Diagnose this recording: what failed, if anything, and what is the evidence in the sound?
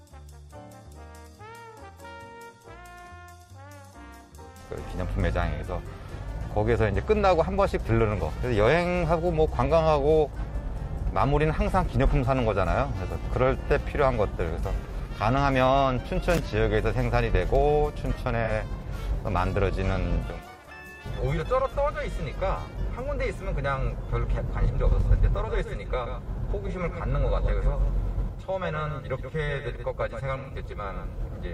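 AAC frame loss with concealment at the codec stage: brief smeared, phasey patches at 5.56–5.62 s, 18.44–18.50 s and 30.39–30.50 s. The decoder papers over lost frames, so these patches do not drop to silence.

A doubled audio track from 25.0 s to the end: a full-band copy about 10 dB quieter trails by roughly 150 ms, likely from a second, slower capture path. Its abrupt onset and lack of decay rule out room echo.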